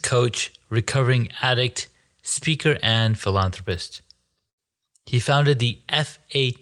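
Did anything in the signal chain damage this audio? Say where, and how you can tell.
Yes. From 3.54 to 4.37 s, in the call processing stage, a filter restarted on every block. It forgets its state at each block edge, so each block opens with a small transient. The result is a level-following buzz at 23.4 Hz, which fits 2048-sample blocks at 48 kHz.

At 4.49 to 4.59 s there is a burst of packet loss on the network. The receiver stretched the last sound for 78 ms and faded it down. Then the audio jumps ahead, and about 80 ms of speech is simply missing.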